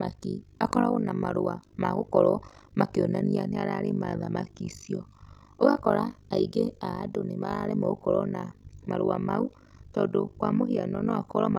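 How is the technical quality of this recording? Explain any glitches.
Quality is poor because of one fault. Overlap-add ripple runs throughout: frames are rejoined with overlap gains that don't sum evenly, so level swings about 60 dB roughly 50 times a second, giving a harsh robotic flutter over the speech.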